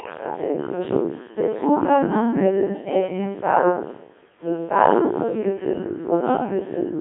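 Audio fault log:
Throughout, Codec 2 vocoder. The speech sounds robotic and buzzy, and is confined to a band of about 150 Hz to 3.6 kHz. Nothing remains above 3.8 kHz. Only pitch, voicing, energy and envelope survive, resynthesised from sine waves. The heavy damage fits roughly 1.6 kbit/s.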